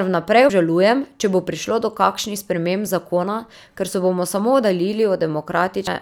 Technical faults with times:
0.49 damaged data in a compressed stream
2.85 damaged data in a compressed stream
5.87-5.90 damaged data in a compressed stream

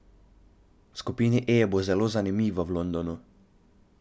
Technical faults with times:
none

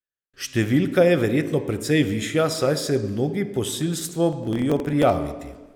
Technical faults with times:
4.09-5.10 processor overload crackle

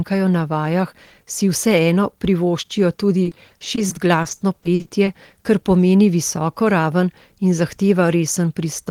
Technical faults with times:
3.23-5.09 repeated packet loss (robotic sound)

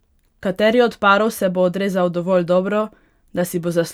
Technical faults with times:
none

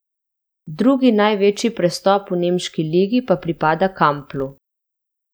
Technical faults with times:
4.16-5.21 filter restarted on every block

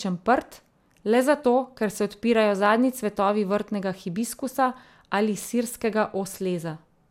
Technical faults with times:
0.00-7.11 generation loss

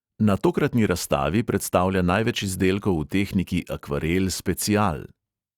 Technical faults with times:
0.38-5.27 clock slip clicks

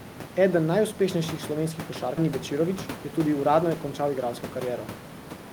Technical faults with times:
2.17 skip ahead
2.27-4.27 jitter buffer speed-up

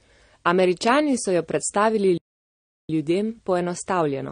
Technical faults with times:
0.00-4.32 transcoding between lossy codecs
2.17-2.89 playback stall
2.89-4.32 time-compressed catch-up

